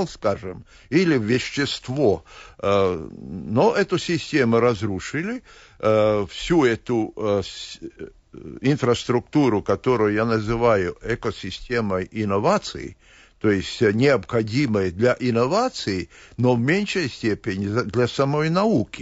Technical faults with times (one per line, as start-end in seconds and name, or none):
0.00-19.02 low-delay AAC compression